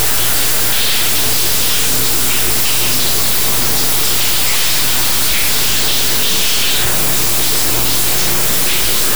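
From start to finish the clip is hit by integer read as float: samples stored as 32-bit integers are being interpreted as 32-bit floats, so each value lands near zero or blows far past full scale. You hear a brutally loud, buzzing square wave that snaps between silence and hard clipping.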